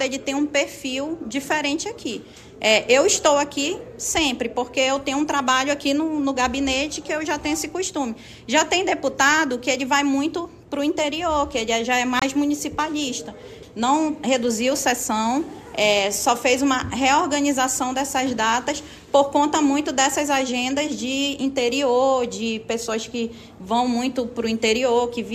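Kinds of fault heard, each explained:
Digital broadcast dropout: the receiver stopped getting decodable frames and muted its output until valid data returned, so the programme material sent during that interval is gone rather than merely degraded. Here it appears as a single very brief hole in the sound from about 12.19 to 12.22 s, a cut of roughly 24 ms, which fits the loss of a single frame. The audio then resumes mid-programme with no repeat of the missing material.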